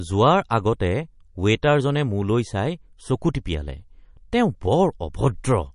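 Throughout, likely MP3 compression starved of bits, fitting roughly 40 kbps, cuts everything above 10.6 kHz and leaves the speech plainly watery and swirly.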